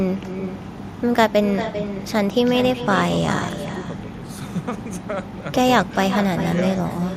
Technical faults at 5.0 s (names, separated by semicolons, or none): echo with no canceller